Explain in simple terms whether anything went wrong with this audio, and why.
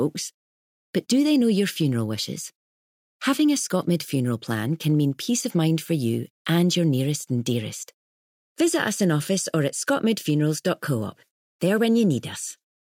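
Nothing stood out on listening; no problems could be heard anywhere in the recording.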